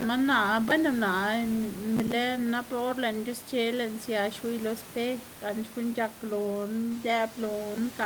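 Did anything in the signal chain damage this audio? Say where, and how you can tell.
No, nothing along the chain seems to have damaged this speech, and the room noise you can hear, sitting about 17 dB below the voice, comes from the space around the microphone rather than from the equipment.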